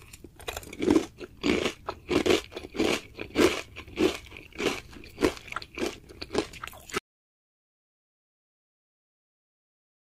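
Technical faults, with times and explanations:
6.98 to 10.02 s, audio dropout to silence: the sound cuts off abruptly into silence with no room tone, likely a lost input, and never returns.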